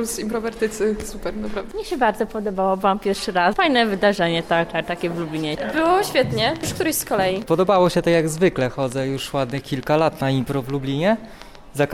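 A train of clicks runs from 5.60 s to 11.84 s: around thirty short pulses of similar shape, arriving unevenly at about 5 per second and peaking roughly 5 dB above the sound, heard as popping throughout, pauses included. Interference or a faulty connection or power supply is the likely cause.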